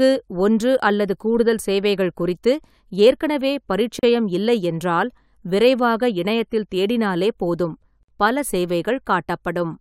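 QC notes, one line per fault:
3.99–4.03 s and 8.03–8.08 s, gap at a join of encoded pieces: the speech breaks off for about 38 ms and then 53 ms, with smeared edges, and resumes exactly where it left off. The gaps fall on a regular 4 s spacing, which fits separately encoded segments joined without trimming the encoder's start delay and last-frame padding. Unlike a dropout, nothing is missing from the speech; silence is inserted rather than content removed.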